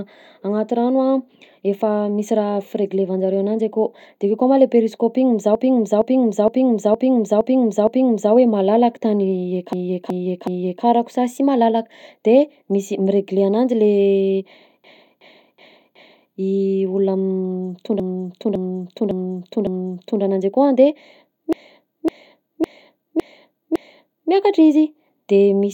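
From 5.55 to 8.34 s, a 0.46 s block of speech plays six extra times. These are repeated frames. A run of compressed frames was written more than once, so the same audio loops and the clip grows longer. Further stutters of 0.37 to 0.56 s blocks follow at 9.73–10.85, 14.84–16.33, 18.00–20.23 and 21.53–24.31 s.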